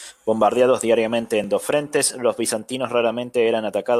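A dropped buffer (overrun) at 1.44 s, just before "dos frentes los bizantinos", cuts into this speech clip as a jump where the sound skips forward with no gap of silence. Only a few milliseconds of audio go missing, but the join is audible. The likely cause is that the recording software fell behind and the hardware overwrote a block of samples before they were read, leaving the surrounding audio spliced directly together.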